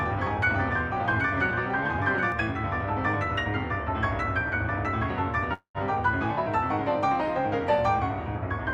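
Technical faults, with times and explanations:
0.00–2.32 s, doubled audio track: a dry full-band copy about 5 dB quieter trails by roughly 0.7 s and stops abruptly, likely a second capture path, unlike a decaying echo.
5.53–5.78 s, call audio freeze: the sound buzzes or hisses on, fades, then goes silent before resuming where it stopped, likely a drained jitter buffer; unlike a dropout, nothing is lost.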